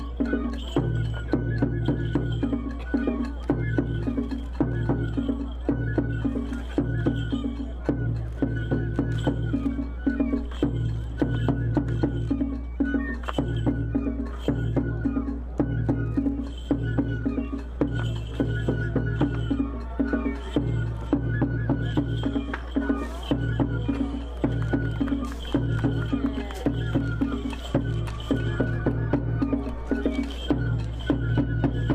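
From start to finish, power-line current is leaking into the signal path, most plausibly through a ground loop or a transformer sitting close to the wiring, so a mains hum rides under everything. It sits at 60 Hz, a steady, dull low drone that never changes pitch or fades, and it is strong, only a few decibels below the wanted sound. That leaves the whole clip muddied and heavy in the bass.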